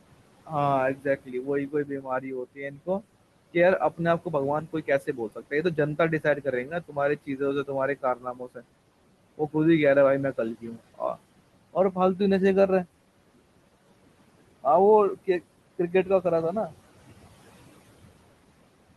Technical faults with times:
0.00-18.96 noise suppressor artifacts
0.95-3.02 speech cut by the noise suppressor
4.73-7.69 speech cut by the noise suppressor
8.02-8.62 speech cut by the noise suppressor
10.55-11.18 speech cut by the noise suppressor
11.73-12.20 speech cut by the noise suppressor

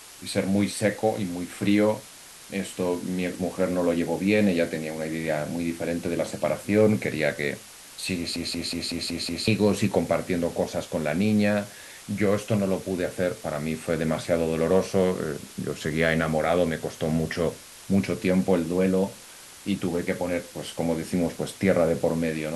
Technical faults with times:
0.00-22.56 low bit depth with dither
8.36-9.47 system hang loop

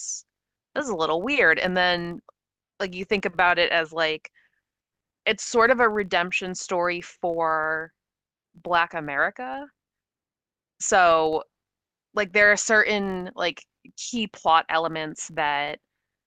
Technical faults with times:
0.00-16.26 filter restarted on every block

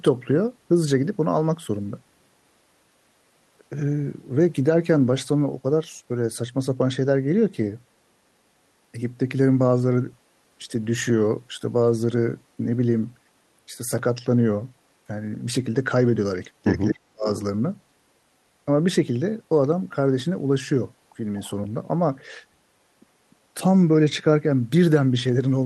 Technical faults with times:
16.90-17.27 speech suppressed in double talk
21.43-21.50 echo leak

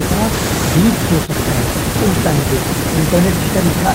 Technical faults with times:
none

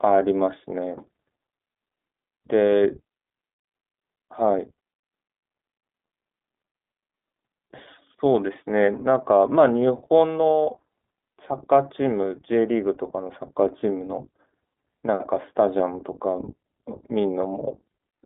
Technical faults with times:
0.00-18.26 iLBC codec

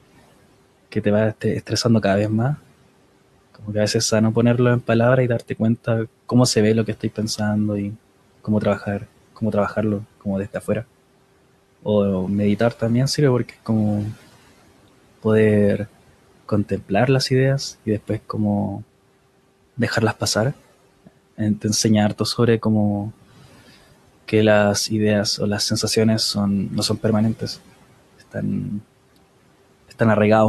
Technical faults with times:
16.49-16.91 speech cut by the noise suppressor

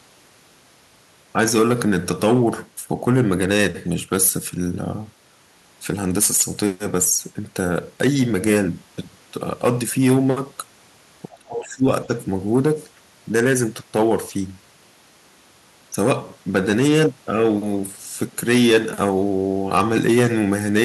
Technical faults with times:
11.39-11.86 speech suppressed in double talk

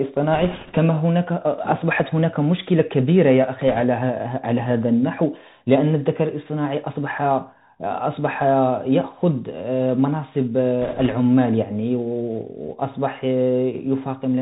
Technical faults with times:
0.00-14.41 Bluetooth CVSD headset codec
0.33-0.78 bit errors on a Bluetooth voice link
3.68-3.84 bit errors on a Bluetooth voice link
10.82-11.14 bit errors on a Bluetooth voice link

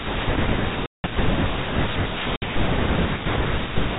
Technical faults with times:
0.86-1.04 packet loss filled with silence
2.36-2.42 packet loss filled with silence

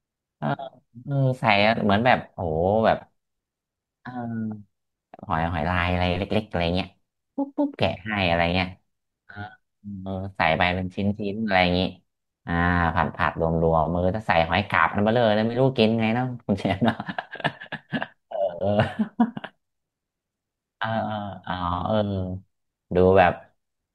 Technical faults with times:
none

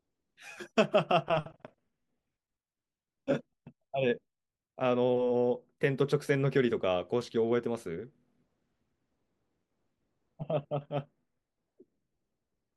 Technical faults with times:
none

